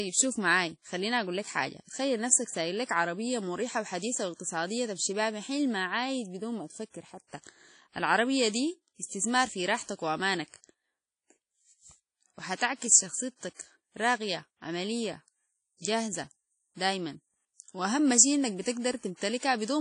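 WMA compression runs through the whole of this speech recording, from start to finish. There is no content above about 10.1 kHz, and the voice carries a plainly audible ringing, washy smear with a hiss that swells and fades along with the signal. That is likely the work of an early WMA encoder at a low bitrate, around 32 kbps. Its long transform blocks spread quantisation noise over tens of milliseconds and zero out weaker spectral detail.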